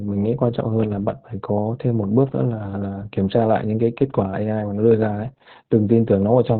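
From start to finish the speech carries heavy Opus voice compression. Nothing reaches above 4.2 kHz, so a spectrogram shows a flat, empty ceiling there. Coarse linear-prediction coding leaves the speech muffled, hoarse and faintly robotic, which fits narrowband SILK at around 8 kbps.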